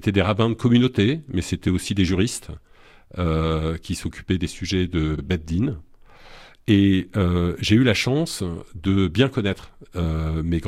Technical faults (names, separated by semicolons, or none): repeated frames